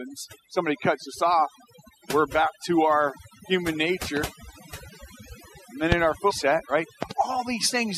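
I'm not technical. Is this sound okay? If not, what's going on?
No. Three separate problems can be heard.

Overdone noise removal: a noise-cleaning tool was set far too strong, so it shut off narrow slices of sound along with the background hiss, taking quiet parts of the speech too. Throughout the clip, the background is near-silent with twinkling specks.

Loud pop: a sudden electrical jolt, likely from a plug, a switch or static, got into the signal. It comes through as a sharp click much louder than the speech, which carries on underneath. This happens at 4.17 to 4.19 s, just after "back to our human", again at 5.92 to 5.94 s, and as a quick double pop at 7.03 to 7.13 s.

Stream segment skipped: the audio was delivered in small chunks, and one likely failed to arrive, so the player jumped to the next. At 6.30 s the sound leaps ahead with a tiny blip, and the piece in between is missing.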